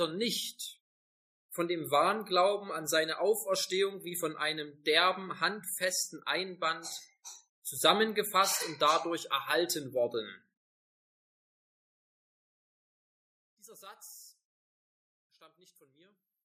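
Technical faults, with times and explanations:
13.16–16.44 s, one channel inverted: the sound drops by about 26 dB to a faint copy, its shared centre content nearly gone. Likely one channel's polarity flipped, cancelling shared content in mono. Unlike a gain drop, only the channel difference remains.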